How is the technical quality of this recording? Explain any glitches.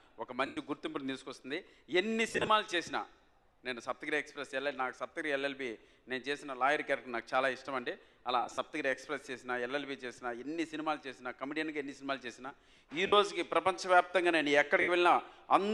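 The recording has five brief dropouts where the sound turns into a hissy, smeared wash and then returns: at 0.46 to 0.57 s, 2.32 to 2.48 s, 8.43 to 8.58 s, 13.06 to 13.13 s, and 14.81 to 14.88 s. These are lost LE Audio frames. Each time Bluetooth frames went missing, the LC3 decoder refilled the gap by reusing the last spectrum with randomised phase signs, so tonal content turns noisy and starts to fade if the gap lasts. The first gap is about 112 ms of continuous loss. The second and third are scattered losses spread over about 150 ms, with the longest runs around 20 ms and 40 ms. The last two are shorter, at 60 ms and 67.5 ms. The timing fits 7.5 ms LC3 frames.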